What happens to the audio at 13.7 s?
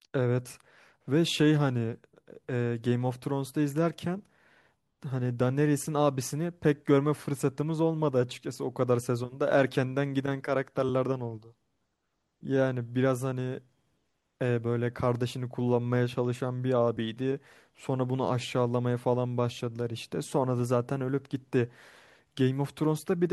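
Nothing goes wrong at 13.7 s: the speech continues intact through that moment, with no dropout, click, glitch or other fault to be heard.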